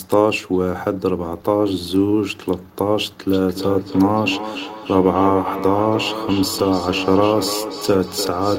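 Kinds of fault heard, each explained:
Feedback echo between two devices: two devices in the same room are on the call, so one plays back what the other's microphone captured, and that microphone picks it up again. Each echo canceller only removes its own device's playback, so the loop goes uncancelled. From 3.33 s to the end, the speech comes round again after roughly 300 ms, thinner and more ringing, with the loudest repeats about 9 dB below the speech.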